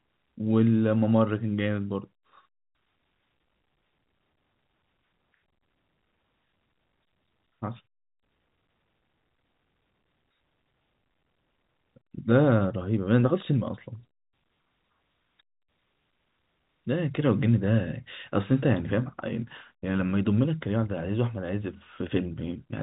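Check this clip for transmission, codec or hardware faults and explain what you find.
No transmission, codec or hardware fault can be heard; the speech sits in a normal telephone-band G.711 path whose content stops at about 3.8 kHz, with at most a faint level-following quantisation hiss beneath it.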